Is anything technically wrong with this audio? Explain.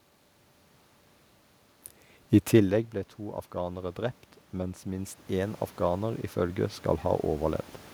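Yes, there is one fault: automatic gain rising, from 4.83 s to 7.56 s, starting just after "to afghanere drept mens". The input level drops by about 12 dB, so the gain control judges the signal too quiet and raises its gain by about 8 dB over nearly three seconds. The speech and the room noise swell together as the gain climbs. The level change around 2.5 s is the talker moving and is not a fault.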